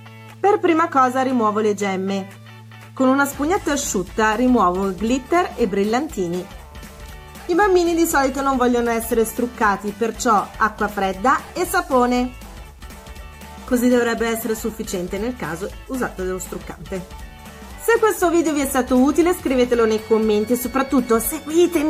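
Low bit depth without dither runs through the whole audio. Quiet passages turn gritty, with grainy distortion that changes with the sound, about 40 dB below the signal. This is likely rounding to about 9 bits, with no dither to decouple the error from the signal.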